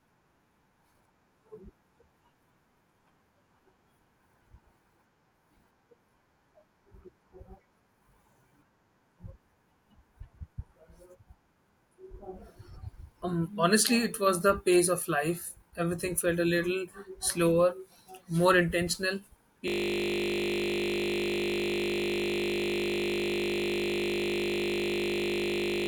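Speech recording that ends in a system hang loop: at 19.68 s the computer or audio driver stalls while the sound hardware keeps replaying its last 20 ms buffer, roughly three hundred times. The speech turns into a steady 50 Hz buzz that lasts to the end.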